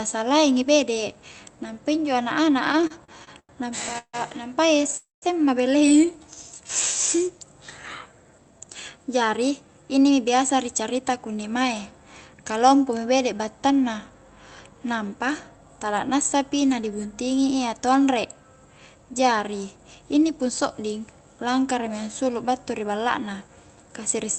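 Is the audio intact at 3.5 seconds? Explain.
No. From 2.67 to 4.15 s, repeated stalls (stutter) leave the jitter buffer empty 11 times. The last sound is stretched, up to 152 ms, for about 400 ms in total, so it drags and stutters. A spectrogram shows smeared, horizontally stretched bands, and the waveform shows repeated, fading segments.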